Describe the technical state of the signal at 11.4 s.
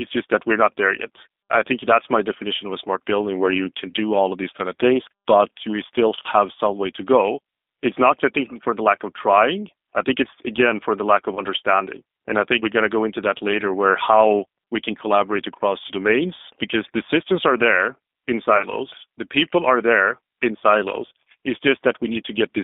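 Right after "for the lack of", from 11.35 to 11.44 s, the speech smears into a brief buzzy tone or coloured noise that fades, and stays weak for a moment once sound returns. This is VoIP packet loss concealed by the speech codec: about 20 ms of audio went missing, which fits two lost 10 ms frames. The decoder filled the gap by extending its last pitch and vocal tract shape at falling gain, and the following frames, built on that guess, take time to recover.

Underneath, the whole passage is narrow, slightly rough and synthetic, confined to roughly 250 Hz to 3.6 kHz, with plainly audible coding damage. This is the G.729 codec (the G.729A variant at 8 kbit/s), which rebuilds speech from a filter, a pitch predictor and a few pulses per frame rather than preserving the waveform.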